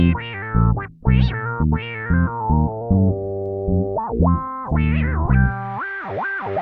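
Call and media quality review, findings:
Findings: no quality issues heard in this music clip.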